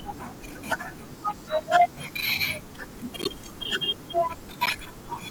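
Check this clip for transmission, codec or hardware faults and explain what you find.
The speech carries three short bursts of corrupt frame decoded, at 0.39–0.43 s, 3.22–3.27 s and 4.66–4.70 s. Each lasts about 45–50 ms, which points to a couple of damaged compressed frames that the decoder played anyway. Flipped bits throw off gains and codes, placing energy at the wrong frequencies. The first is faint. The later two are loud. Unlike a dropped frame, there is no smeared repeat, just a short burst of foreign sound.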